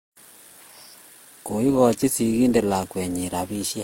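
From the first moment to the last, the speech has a layered coding texture. Different coding artefacts sit on top of each other in a way no single codec would produce, and nothing gets through above 16.3 kHz. Transcoding between lossy codecs is the likely culprit. The sound suggests an Opus pass at around 32 kbit/s followed by HE-AAC at a similar rate, with the second encoder spending bits on the first one's damage and adding its own.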